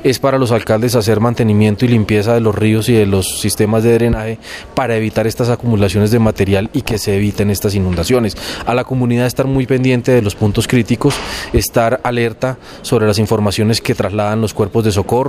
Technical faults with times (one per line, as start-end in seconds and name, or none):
none